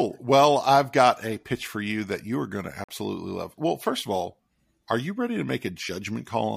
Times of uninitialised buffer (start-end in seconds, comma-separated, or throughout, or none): none